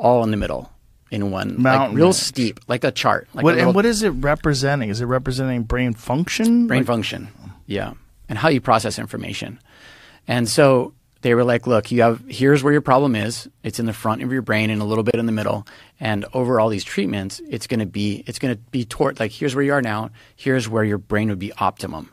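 At 15.11 s, just after "brain and a little", a 31 ms gap at a join of encoded pieces opens. Unlike a dropout, the speech resumes exactly where it stopped, "in the middle".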